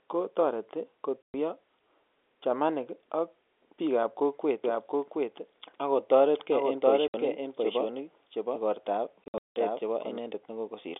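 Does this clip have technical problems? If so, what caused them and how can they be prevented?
Yes. Packet loss filled with silence: the network dropped packets and the receiver played nothing in their place, cutting hard-edged holes at 1.23–1.34 s (120 ms), 7.08–7.14 s (60 ms) and 9.24–9.56 s, where 260 ms went missing over 320 ms with a longest gap of 180 ms. The hole lengths fit 20 ms packets. A jitter buffer with packet loss concealment, plus forward error correction on lossy links, would smooth these over.

Doubled audio track: a second copy of the sound, likely picked up again through a slower path such as a monitor feed or a duplicated recording chain, runs from 4.64 s to 10.18 s. It trails the original by roughly 0.7 s at about 5 dB lower, with no room colour, and it starts and stops abruptly. Routing the signal once, muting local monitoring into the send, and enabling echo cancellation would prevent it.

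The telephone-band G.711 coding itself can be heard only as the narrow 300–3500 Hz line sound, not as a fault.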